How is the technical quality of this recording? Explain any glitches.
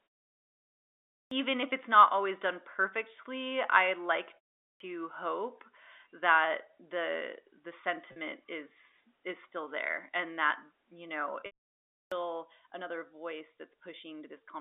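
The recording has three kinds of glitch: a band-limited, duller input for most of its length, three clipped word onsets after pauses, and two short packet-loss patches. All of it is heard through a telephone-band G.711 path.

Input switched to a poorer device: From 0.0 s to about 11.69 s, the sound is boxy and dull. Nothing passes above 3.8 kHz, and there is a faint extra noise floor, roughly 45 dB below the signal. The likely cause is that the system was taking its input from a lower-grade microphone or headset profile and then switched back. At 11.69 s there is a silence of about 200 ms, and the level shifts by roughly 5 dB. A spectrogram would show a flat ceiling at 3.8 kHz up to that gap and a slightly different noise texture afterwards.

Clipped start after a pause: At 1.23 s, 4.72 s and 12.02 s, the sound jumps in abruptly without its opening. About 83 ms, 82 ms and 96 ms are lost. 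The output device seems to drop into an idle state during the preceding pauses, which last 1.23 s, 0.4 s and 0.52 s, and it takes that long to wake. On a waveform, each onset starts abruptly with no rising edge.

Packet loss with pitch repetition: At 8.12 s, about 40 ms is lost, which fits two 20 ms packets. The receiver fills the gap by repeating the last pitch cycle, so you hear a brief, slightly buzzy hold. Between 11.4 s and 11.51 s the damage is heavier: about 100 ms is lost, scattered over 160 ms, with a longest run of 60 ms. That patch gives a stuttering, held tone that thins and then cross-fades back. A spectrogram would show frozen, evenly repeated harmonic stripes in place of the normal movement.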